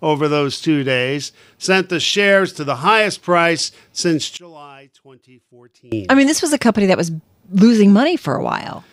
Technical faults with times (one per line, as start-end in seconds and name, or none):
4.37-5.92 one channel inverted